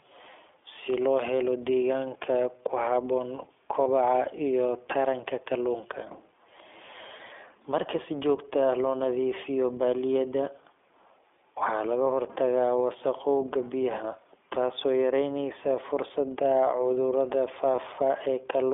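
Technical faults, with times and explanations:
Throughout: iLBC codec. The speech is confined to a narrow telephone band of about 300 Hz to 3.5 kHz and has a plainly audible rough, slightly synthetic grain. The sound points to iLBC at its higher rate, about 15.2 kbps, coding each frame independently. It is a steady, uniform coarseness rather than isolated glitches.
3.84–3.87, 7.18–7.21 and 17.76–17.80 s: lost iLBC frames. Each is a brief single-frame dropout, consistent with one lost 20 ms packet. The decoder fills it by repeating the last pitch cycle with some noise, so it sounds like a tiny held, buzzy vowel rather than silence or a click. Because iLBC frames stand alone, the speech recovers immediately, with no smeared aftermath as in predictive codecs.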